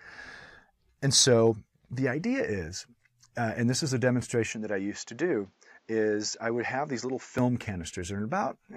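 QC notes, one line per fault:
4.52–7.38 s, input switched to a poorer device: the band abruptly narrows to nothing above 7.6 kHz and a new background noise appears around 40 dB below the signal, with no gap or real level change. The likely cause is a switch to a narrower-band microphone or headset profile and back.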